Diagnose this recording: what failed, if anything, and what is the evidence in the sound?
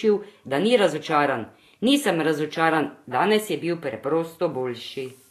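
The codec stage is the likely culprit: Vorbis compression at low quality. Across the whole clip the speech has a hissy, grainy treble and nothing above 14.2 kHz. Coarsely quantised high bands turn detail into noise, which fits a bitrate near 34 kbps.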